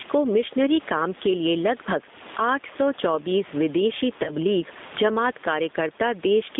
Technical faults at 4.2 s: gain pumping; G.729 codec; VoIP packet loss concealed by the speech codec

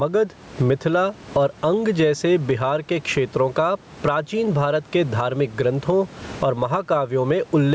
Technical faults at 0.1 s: gain pumping

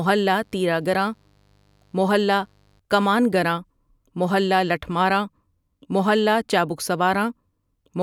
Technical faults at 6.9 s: none

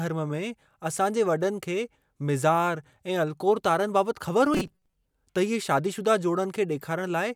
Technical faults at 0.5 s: none

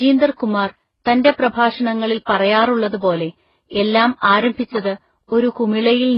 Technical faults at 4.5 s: transcoding between lossy codecs

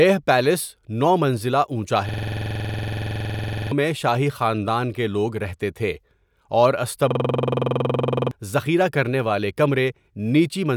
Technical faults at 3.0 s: system hang loop

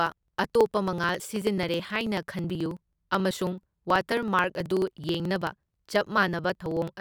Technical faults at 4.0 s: periodic USB or driver dropouts

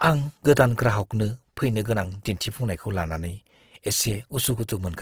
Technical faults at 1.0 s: Opus compression

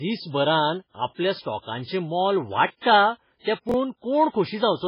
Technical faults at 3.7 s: MP3 compression; chunks out of order

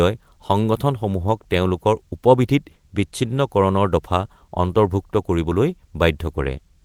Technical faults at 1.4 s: none

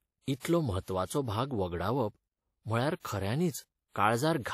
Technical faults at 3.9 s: WMA compression

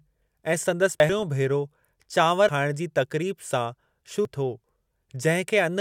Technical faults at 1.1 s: compressed frames skipped

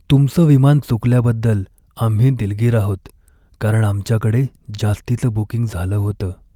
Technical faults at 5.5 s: none

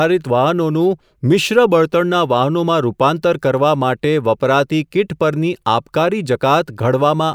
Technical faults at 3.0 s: none

